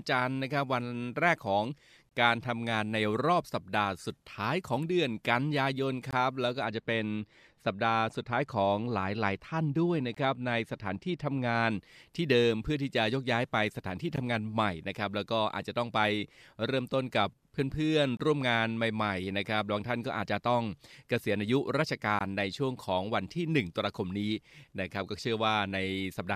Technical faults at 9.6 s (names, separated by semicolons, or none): de-emphasis applied wrongly